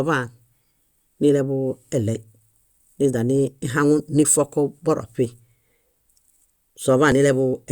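A speech recording with two tiny skips, each where the waveform jumps abruptly, at 3.13 s and 7.12 s. They come from overlap between stream segments: adjacent segments, here 4 s long, carried time stamps that overlapped, so the player trimmed the shared stretch even though that audio was not actually duplicated. Roughly 5 ms and 9 ms of real sound were removed at each boundary, producing the discontinuities.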